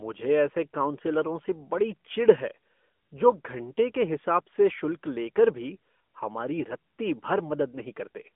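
Throughout, the speech sounds thin and buzzy, band-limited to roughly 200 Hz–3.4 kHz with nothing above 3.6 kHz: AMR narrowband mobile codec coding, consistent with its 10.2 kbps mode.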